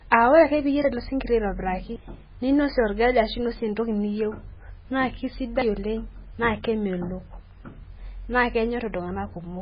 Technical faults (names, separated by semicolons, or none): MP3 compression